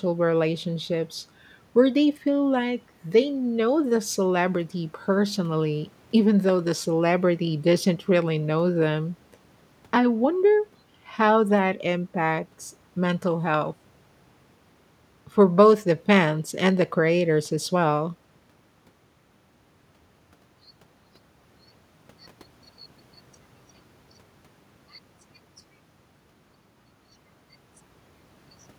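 Nothing in this speech recording stands out as a technical fault at any point, so there's nothing to flag here.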